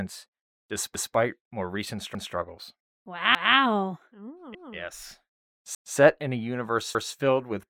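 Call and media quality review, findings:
Overlapping chunks: chunking stage starts each 1.0 s block about 200 ms before the previous one ends, so the overlap region is emitted twice. Symptom: 200 ms of speech replayed at each join, a regular stutter with a click at the seam. Occurs at 0.95–1.15, 2.15–2.35, 3.35–3.55, 4.55–4.75, 5.75–5.95 and 6.95–7.15 s, every 1.2 s. Probable component: segmentation or reassembly buffer in the processing or transport path.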